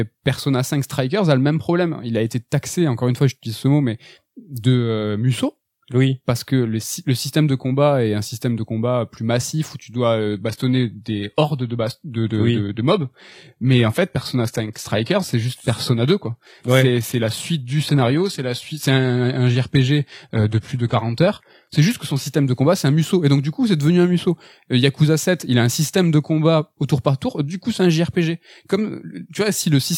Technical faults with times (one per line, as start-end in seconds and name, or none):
10.31-22.31 adaptive stream at a lower bitrate